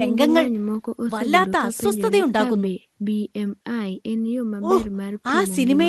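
No technical faults can be heard anywhere in the clip, so there are none to describe in time order.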